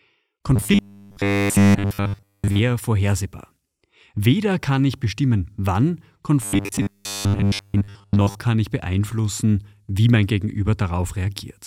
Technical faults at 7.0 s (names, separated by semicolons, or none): robotic sound from repeated short buffers